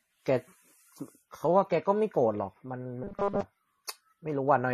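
From start to finish the speech has a dull, smeary quality: two distinct sets of compression artefacts layered on each other, and nothing at all above 13.6 kHz. This is likely transcoding between lossy codecs, consistent with an MP3 encode later re-encoded as AAC-LC, each pass adding its own damage.

From 3.04 to 3.41 s the speech collapses into a rigid, metallic buzz at 200 Hz that loosely tracks the syllables. That points to robotic sound from repeated short buffers: with new audio arriving too seldom, a roughly 5 ms chunk is likely replayed over and over while most of the real signal is skipped.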